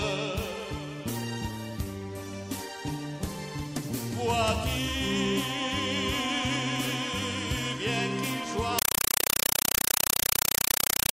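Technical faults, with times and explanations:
8.79–11.13 s, compressed stream played as audio: undecoded data, consistent with a 256 kbps AC-3 stream, plays as samples, producing loud chattering static in 5.33 ms bursts, 31.25 per second.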